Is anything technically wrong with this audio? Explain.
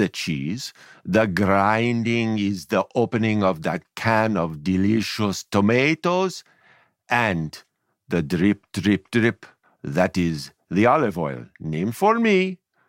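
No, no technical faults here.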